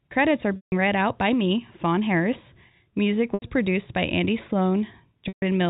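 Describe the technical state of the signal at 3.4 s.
Packet loss with pitch repetition hits at 3.4 s. Audio went missing from 3.34 to 3.42 s, a gap of 80 ms, which fits four lost 20 ms packets, and the receiver filled it by repeating the last pitch period and fading that copy out over about 50 ms. Because the gap outlasts the fade, the held, buzzy tone dies into silence before the speech returns with a short cross-fade on "produced by", still within the telephone band below 4 kHz.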